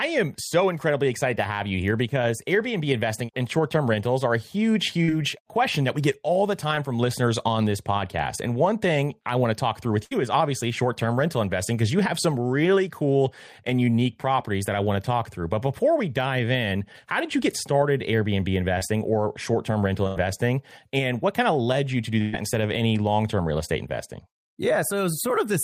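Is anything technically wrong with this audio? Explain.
Yes, the speech has dropouts from lost network packets.

Short concealed packet loss at 6.75–6.79 s, between "we get all the" and "from listeners on this", and at 18.79–18.83 s. About 20 ms of audio never arrived in each case. The receiver extended the preceding sound to cover it, leaving a brief smear or wobble.

Bursts of packet loss at 10.05–10.13 s, at 20.07–20.17 s after "or short term rental", and at 22.21–22.35 s between "led you to do" and "instead of any long". About 60, 80 and 120 ms were lost. Each gap was filled by the last sound, held and fading, before the speech resumed further on.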